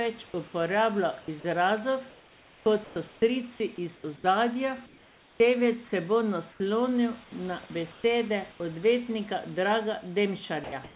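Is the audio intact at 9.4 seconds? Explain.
Yes, the audio is intact at 9.4 seconds, with the speech carried through the call path's G.711 mu-law coding, band-limited to 4 kHz, and the room's background noise sitting about 27 dB below it.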